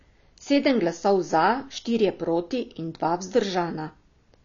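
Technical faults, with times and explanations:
Throughout, AAC compression: nothing gets through above about 7.1 kHz, so the speech sounds dull and boxed-in, with the air and crispness at the top simply gone. The coding damage is plainly audible rather than subtle. That hard ceiling plus the obvious artefacts is most likely AAC-LC squeezed down to a low bitrate, something like 24 kbps, where the encoder drops the highest band and spends its few bits on what hearing is most sensitive to.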